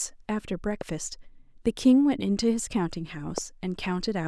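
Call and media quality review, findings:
Loud pop at 0.81–0.83 s and 3.38–3.40 s: single sharp pop each time, roughly 10 dB above the speech, which continues underneath. Likely a voltage step or pulse, such as a plug or switch transient, static, or a driver glitch, shaped by downstream circuitry.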